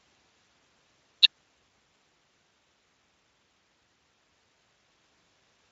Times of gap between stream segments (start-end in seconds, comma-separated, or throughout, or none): none